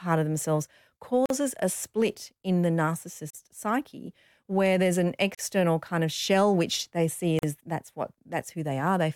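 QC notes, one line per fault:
1.26 to 7.43 s, gap at a join of encoded pieces: speech drops out for about 43 to 45 ms every 2.0 s, at 1.26, 3.30, 5.35 and 7.39 s. The first falls between "of themselves" and "a split in the", the third between "psyche where there's an" and "kind of shell which", the last between "shell which they see" and "is that's what". The audio was encoded in 2 s chunks and stitched together untrimmed, so each encoder's start-up delay and padded final frame stay in as a short hole with smeared edges, and the speech then carries on where it stopped.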